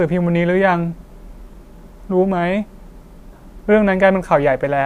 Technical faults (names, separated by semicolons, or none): none